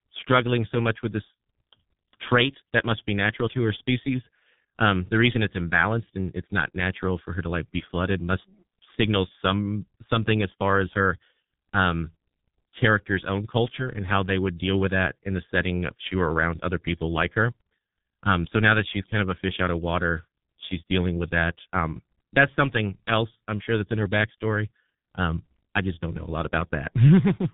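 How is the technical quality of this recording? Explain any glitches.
The technical quality is poor, because the speech has been through a G.723.1 codec for the whole recording. The codec squeezed the audio into very few bits and slow 30 ms frames, which fits a rate near 6.3 kbit/s. It removed everything above 3.8 kHz and redrew the voice coarsely, so the speech sounds muffled and hoarse, with smeared, indistinct consonants.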